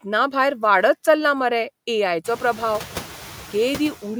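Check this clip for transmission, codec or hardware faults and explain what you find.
One fault runs through the whole speech clip. Noise suppressor artifacts, throughout: the suppressor judges which frequency bands hold steady noise and turns them down frame by frame, but it cuts only about 2 dB. The background dips faintly between phrases and swells back under speech. The room noise, which jumps by about 23 dB around two seconds in and then sits about 16 dB below the speech, is part of the recording.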